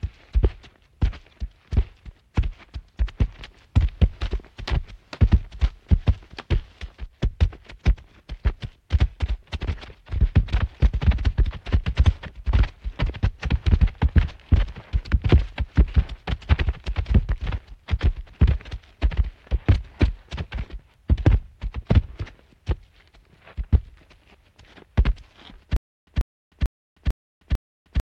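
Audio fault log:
25.76 s to end, stutter with silent gaps: a likely stalled stream replays the same 0.14 s burst five times, separated by 0.31 s of dead silence, every 0.45 s.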